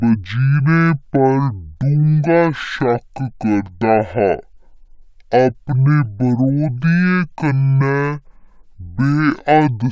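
From start to finish, the samples are being played at half the rate they were captured at, with no conversion, a wrong sample rate error that fits 32 kHz material clocked out at 16 kHz. Because every sample simply lasts twice as long, speed and pitch fall together: the speech runs at 0.5 times its proper pace and sits a full octave, 12 semitones, lower, so voices come across deep, slow and dragging.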